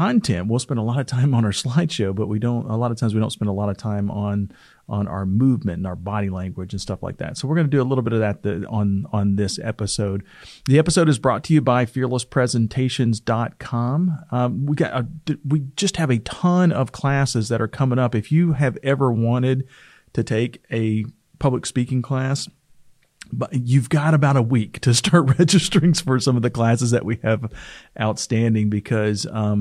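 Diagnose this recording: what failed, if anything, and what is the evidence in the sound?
Nothing in the recording points to a failure at any stage, from the analogue wiring and converter through to storage and playback, so there is no fault to diagnose.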